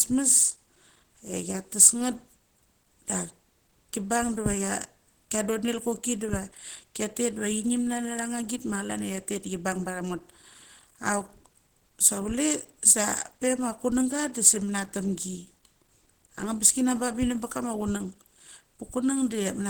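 Throughout the clip, the speech was likely passed through Opus compression at a low rate, which fits about 16 kbps, with the encoder in its hybrid speech mode. The band still reaches about 20.1 kHz, but the codec damage is plainly audible, leaving the speech muffled and hoarse.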